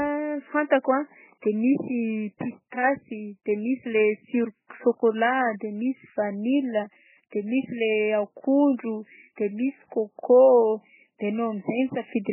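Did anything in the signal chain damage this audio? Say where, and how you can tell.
Yes, the codec stage likely starved an MP3 encoder of bits, fitting a very low bitrate: the speech stops dead above 3 kHz throughout, with heavy watery, swirling MP3 compression artefacts.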